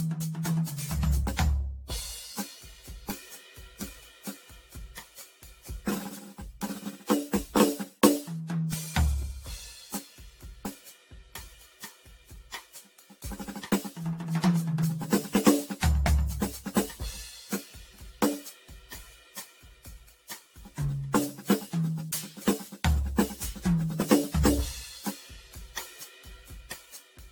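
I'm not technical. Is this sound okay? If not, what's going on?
No. The music has a smeared, swirly, hollow quality from start to finish, and the sharp starts of sounds are blurred rather than crisp. That is generation loss. It was likely saved in a compressed format, opened, and saved again, around ten times over. Each save throws away a little more detail in a slightly different place, so the damage builds up. Nothing above about 18.6 kHz remains at the very top.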